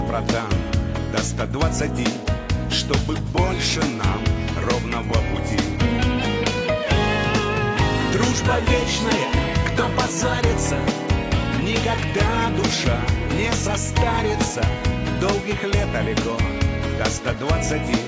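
Nothing here calls for a technical complaint; the audio runs its whole course without any fault to point at.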